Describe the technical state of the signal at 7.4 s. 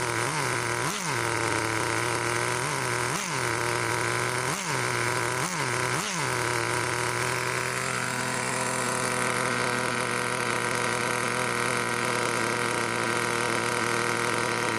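At 7.4 s the signal is intact, with no dropout, distortion, glitch or other audible fault.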